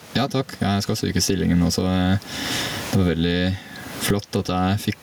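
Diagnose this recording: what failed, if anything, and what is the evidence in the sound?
Gain pumping runs throughout, likely from input gain set far too high before a fast limiter or compressor. Every loud syllable pulls the level down by roughly 25 dB, squashing the speech. The room noise, about 36 dB under the speech, is part of the recording.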